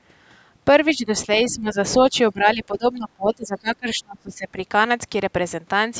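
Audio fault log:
0.87–0.91 s and 1.32–1.38 s: other side's voice leaking through. Brief scraps of a second voice sit under the talker, about 30 dB below the speech in the first and about 20 dB below in the second, so the later one is easier to hear. These are likely residual echo: the far end's loudspeaker sound reached the microphone and the echo canceller left some behind. Unlike reverberation, which is the talker's own voice smeared in time, this is a different voice.
0.94–1.11 s, 1.5–1.77 s, 2.03–2.15 s and 2.33–4.58 s: speech suppressed in double talk. The talker's level dips each time, by about 10, 15, 5 and 25 dB, and the last stretch lasts roughly two seconds. The likely cause is the echo canceller turning everything down while both sides spoke at once, because it could not separate the talker from the loudspeaker echo. Packet-loss dropouts are abrupt gaps or glitches, while these are gain dips that track the overlapping talk.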